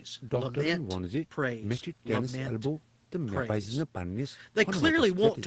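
Nothing goes wrong in this speech, which simply carries the ordinary sound of a call: the top end stops at about 8 kHz, as you'd expect from a narrowish call codec.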